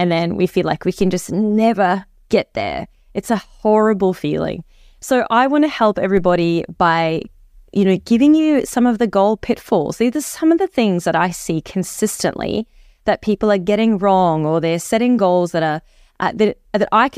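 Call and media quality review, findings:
DC step at 1.01 s and 6.17 s: low thump each time, speech carries on. Offset jump of about -20 dBFS, then bleeds away through a roughly 2 Hz high-pass.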